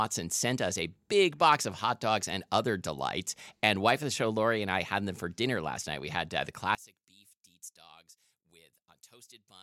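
From 6.75 s, right after "had uh the", the speech suddenly collapses to a faint residue about 23 dB quieter, and it stays that way to the end of the clip. The centred voice and its low end all but disappear, leaving only what differs between left and right. This is likely one channel inverted: with one side's polarity reversed, the shared centre cancels when the two channels are summed to mono.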